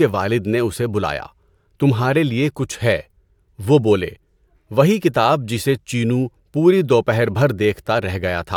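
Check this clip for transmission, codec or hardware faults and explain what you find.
No transmission, codec or hardware fault can be heard anywhere in the recording, with the speech signal arriving continuous and intact throughout.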